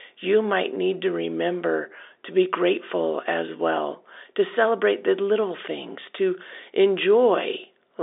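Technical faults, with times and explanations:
No technical faults are present; the speech carries the narrow band of ordinary G.711 telephone coding, roughly 300 Hz to 3.7 kHz, with the faint level-following hiss typical of that format.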